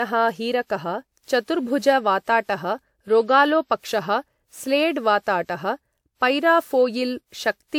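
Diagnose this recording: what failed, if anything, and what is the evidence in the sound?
The codec stage failed. Across the whole speech clip the sound is swirly, smeared and hollow, with blurred consonant attacks, though the band still reaches about 20.1 kHz. That's generation loss, likely from around seven passes through something like 128 kbit/s WMA, each re-quantising on a shifted frame grid.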